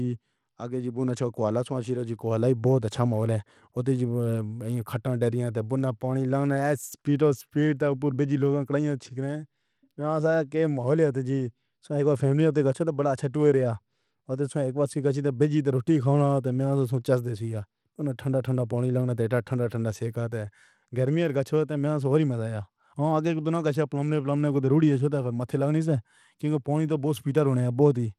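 Throughout the speech, treble flickers and drops out above 17 kHz with gritty noise, likely Bluetooth SBC compression at a low bitrate around 96 kbps starving the upper sub-bands.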